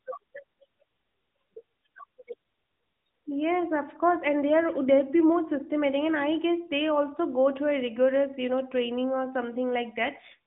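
No technical faults are present in this speech, which carries the narrow telephone band of the AMR narrowband mobile codec, with nothing above about 3.8 kHz and only the light coding texture that fits its highest-rate mode.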